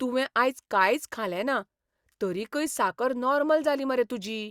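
No technical faults occur at any point in this speech recording.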